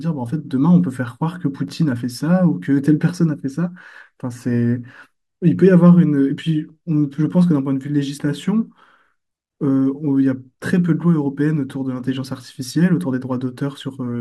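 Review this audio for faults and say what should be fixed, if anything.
The speech has overlapping chunks, heard as brief clicks at 1.68, 4.19 and 6.70 s. The clicks fall 2.5 s apart, which points to the audio being processed in 2.5 s chunks. Each new chunk starts slightly before the previous one ends, so about 6.5 ms of sound plays twice at the join. That tiny repeat breaks the waveform's continuity and gives the click. To fix it, make each chunk start exactly where the last one ended, or crossfade and trim the shared region.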